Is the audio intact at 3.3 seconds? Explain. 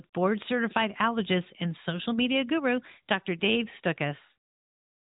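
Yes, the speech is intact at 3.3 seconds, with nothing beyond the narrowband band limit and light coding character of the AMR-NB mobile codec that runs through the clip.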